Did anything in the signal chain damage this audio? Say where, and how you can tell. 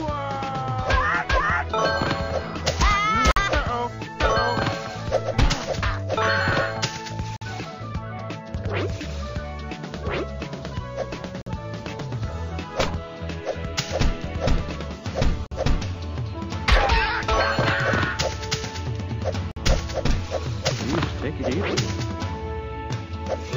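Yes. There is a gap between chunks at the playback or chunked-delivery stage: hard-edged 50 ms silences at 3.31, 7.36, 11.41, 15.46 and 19.51 s, exactly 4.05 s apart. Each chunk plays intact, then sound stops and restarts late, as happens with padding or a delayed chunk start.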